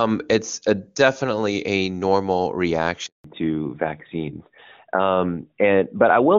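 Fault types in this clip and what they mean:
Handover gap: Right after "a definitely a normal" the speech cuts off within a few tens of milliseconds and stays silent for 180 ms, from 3.06 to 3.24 s. The call was switched between networks and no speech frames arrived during the move, so that stretch is simply lost.
Fallback to narrowband: From 3.24 s to the end the speech sounds duller and rougher, with nothing above 4 kHz. After the handover the call left HD Voice at a quality that fits 23.85 kbit/s AMR-WB and continued on the older narrowband codec, AMR-NB at 12.2 kbit/s.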